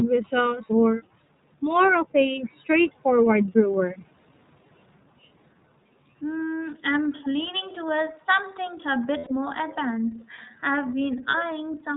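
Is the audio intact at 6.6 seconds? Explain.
No. At 6.6 seconds, as throughout the clip, the speech has passed through the iLBC codec, a narrowband VoIP coder. Each 30 ms frame is coded on its own, without drawing on the frame before, at a rate that fits iLBC's 13.3 kbps mode. Nothing above 4 kHz survives, so the speech sounds dull and band-limited, and the frame-by-frame excitation coding leaves a plainly audible rough, slightly synthetic edge.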